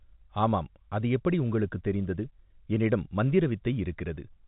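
No technical faults are audible.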